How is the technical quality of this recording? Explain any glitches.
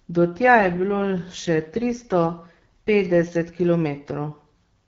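The speech has one glitch: an AMR rate drop on the HD Voice (AMR-WB) link. Between 0.56 and 3.49 s the voice turns rougher and more synthetic, which fits the network stepping the codec down from 12.65 to 8.85 kbit/s to protect a weak radio link. The bandwidth stays the same and there is no gap, which distinguishes it from a band switch or a dropout.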